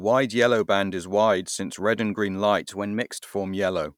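A short speech recording has one fault: from 2.59 s to 3.23 s the audio runs about 6% fast and rises by about 101 cents, roughly a semitone, then snaps back to normal speed and pitch. Speed and pitch move together, with no gradual glide in or out. The likely cause is a drift correction step, in which clock-matching software briefly changed the playback rate in one jump to rebalance its buffer.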